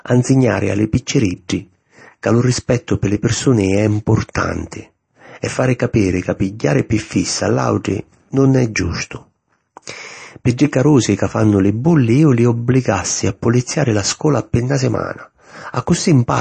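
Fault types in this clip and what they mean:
MP3 compression: the speech sounds watery and swirly with nothing above 8.3 kHz, likely from MP3 encoding at a bitrate as low as 32 kbps.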